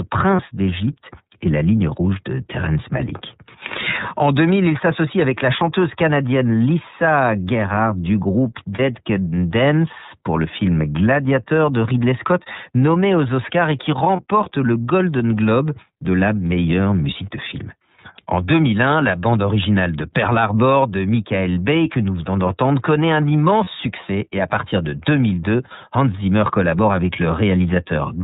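Throughout, the speech has passed through the iLBC codec, which codes each frame's excitation independently and discards everything above 4 kHz. The audible damage is plain: the speech is narrowband and muffled at the top, with a rough, slightly synthetic grain. The frame structure heard fits iLBC's 13.33 kbps mode with 30 ms frames, where each block is coded without help from the one before.

Lost iLBC frames occur at 0.36–0.40 s, 8.75–8.80 s, 14.16–14.22 s and 23.64–23.68 s. In each case a packet failed to arrive, and the decoder filled the hole by repeating the last pitch cycle blended with noise. Each gap is short, consistent with a single missing 30 ms frame, and is heard as a brief held, faintly buzzy vowel. Because iLBC frames stand alone, clean decoding resumes almost immediately afterwards.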